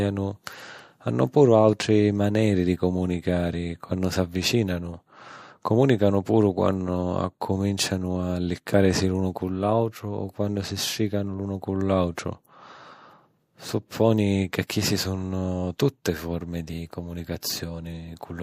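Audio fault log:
12.15–12.17 s, 14.67–14.69 s and 17.41 s: pre-echo. A short hiss of 17–24 ms, about 10 to 17 dB above the surrounding floor, comes before sharp attacks just after "si strìcanu l'unu cu", just before "sunno tutte forme di" and just after it. The spread fits a roughly 36 ms transform block with no switch to short blocks, so the coding noise for the attack fills the quiet gap before it. On a spectrogram, broadband haze precedes each onset. The waveform shows low fuzz before each transient.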